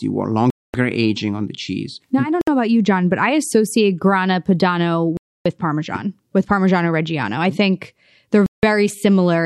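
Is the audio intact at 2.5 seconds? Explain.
No. A Bluetooth stall leaves about 61 ms of silence from 2.41 to 2.48 s, between "I don't" and "know about you"; the likely cause is a drained headphone buffer awaiting resent packets.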